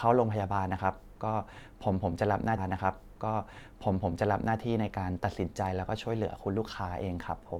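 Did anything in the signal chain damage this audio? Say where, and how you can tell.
Yes. A stream segment repeated at the playback stage: from 2.57 s to 4.57 s the speech replays a two-second stretch, with a small blip at the jump back. A two-second stretch of speech recurs intact, which distinguishes it from a short concealment loop or a skip.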